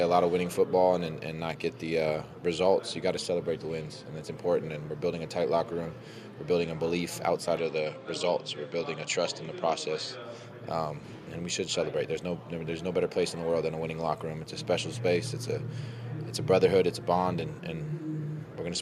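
From 7.57 s to 10.23 s the sound narrows and dulls with no gap and little change in level, likely an input switched to a poorer device. A spectrogram shows the upper frequencies cut off, with a faint new noise floor some 50 dB down.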